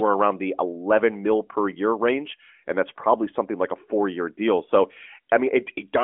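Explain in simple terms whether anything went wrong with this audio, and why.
Nothing stood out as wrong when listening to this speech recording.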